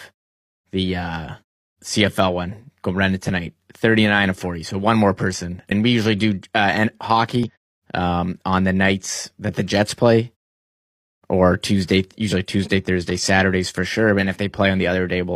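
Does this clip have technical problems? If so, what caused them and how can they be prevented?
Yes. Damaged data in the compressed stream causes two short blips. One is at 5.67–5.72 s, between "so one more person" and "we usually do". The other is at 7.43–7.50 s, before "um on the nights". Corrupt frames there made the decoder lose sync and hunt for the next frame header. Verified, error-checked transfer or storage would prevent it.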